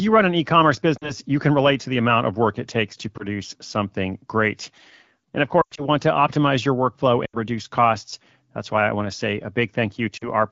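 Lost AMR speech frames break the speech at 0.97–1.12, 3.17–3.24, 5.61–5.85, 7.25–7.37 and 10.17–10.29 s. The decoder stretches the last good sound with falling gain, so gaps smear and fade instead of cutting to silence, which sets them apart from plain dropouts. The longest, at 5.6 s, drifts away before recovering roughly.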